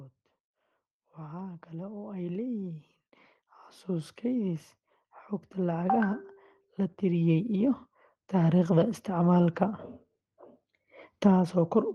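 The automatic gain control judged the input too quiet and ramped up its gain twice: by about 9 dB from 0.98 to 2.92 s, then about 5 dB from 6.66 to 8.6 s, so speech and background noise swell together each time.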